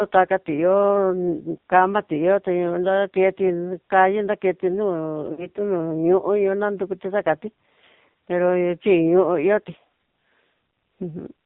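From the start the whole thing runs through an AMR narrowband mobile codec, and a heavily squeezed one. Nothing gets through above 4 kHz, and the voice has that buzzy, synthetic edge you get when the vocal-tract model is starved of bits, which points to one of the low modes, around 6 kbps.

Then at 5.32 s there are lost AMR speech frames, running to 5.47 s. The decoder papers over the gap by repeating the last good pitch and spectral settings at falling level, so the speech smears and sags before it recovers a bit roughly. The gap fits roughly three lost frames, about 60 ms.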